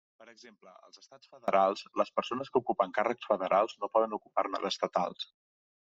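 From the start to 1.48 s, just before "les persones que ocupen", the speech falls by about 28 dB to a faint trace in mono. The likely cause is one channel inverted: one side's reversed polarity cancels the centred voice when summed.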